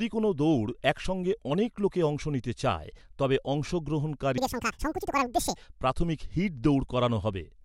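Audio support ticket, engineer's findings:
Wrong sample rate, 4.38–5.56 s. Playback clock running at twice the source rate, no resampling; fits 24 kHz material sent to a 48 kHz output. Speech plays at 2.0x speed, pitch up 12 semitones (a full octave), voice high and hurried for that stretch. Check rate negotiation or the resampler in the playback path.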